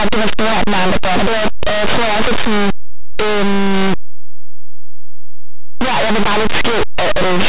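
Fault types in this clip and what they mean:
Linear audio read as companded: Plain 8-bit samples are decoded as mu-law codes. Near-silent values on one side of zero jump to the largest outputs while those on the other side stay small, so the whole speech clip sounds harshly distorted.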